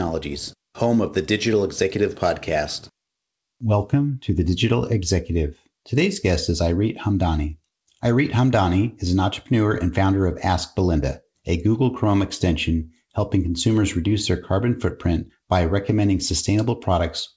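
No technical faults can be heard in the speech, which comes through a working call path whose wideband codec leaves nothing above 8 kHz.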